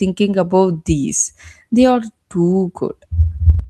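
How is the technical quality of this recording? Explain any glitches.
No glitches to report: the speech has the band-limited character of a call path, with top end stopping around 12 kHz in a way that fits Opus at a modest bitrate, and nothing beyond that needs explaining.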